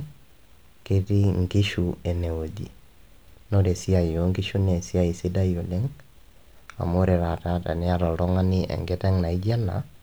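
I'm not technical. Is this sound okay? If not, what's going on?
Yes, it's fine: nothing in this recording sounds broken or glitchy, so there's nothing to worry about.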